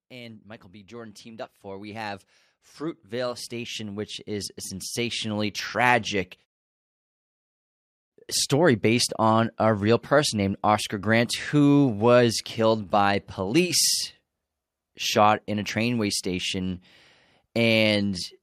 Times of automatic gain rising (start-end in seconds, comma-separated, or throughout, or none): 0.09-6.11